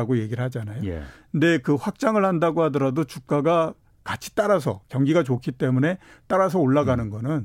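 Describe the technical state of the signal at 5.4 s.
At 5.4 s the audio is intact, with no technical fault present at that moment.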